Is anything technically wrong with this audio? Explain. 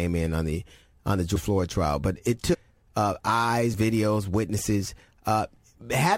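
Yes. Compressed frames are skipped at 2.53 to 2.55 s, right after "trial but it" and just before "uh eyes videos". A run of encoded frames never reached the output, either missing from the stream or rejected as corrupt by the decoder, so playback leaps forward by something like 20 frames, roughly 400 ms of speech. The speech lurches abruptly ahead.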